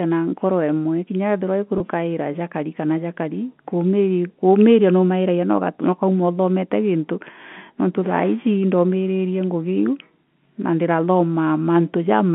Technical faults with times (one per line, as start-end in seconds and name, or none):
1.78-1.80 packet loss with pitch repetition